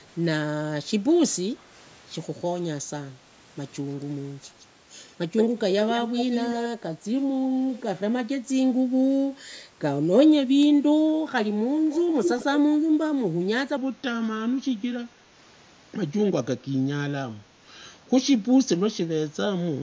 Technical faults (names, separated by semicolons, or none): echo leak; section at the wrong speed